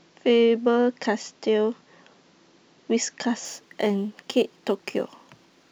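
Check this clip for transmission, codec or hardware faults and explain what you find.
One fault, crude rate conversion, runs from 3.45 s to the end of the clip. Here the speech was resampled without any anti-aliasing filter, simply taking the nearest existing sample, which fits a conversion from 48 kHz to 44.1 kHz. Skipped samples recur in a fixed rhythm set by that ratio, creating an error roughly 30 dB below the speech. It sounds like a faint, gritty, inharmonic fizz riding on louder and brighter moments of the speech.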